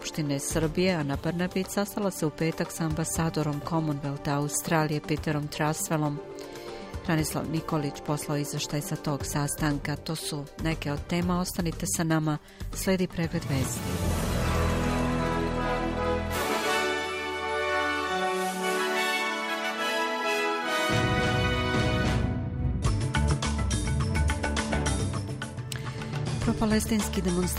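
No technical faults can be heard anywhere in this recording.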